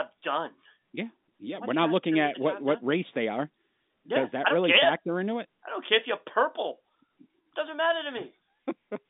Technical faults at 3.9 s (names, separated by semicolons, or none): none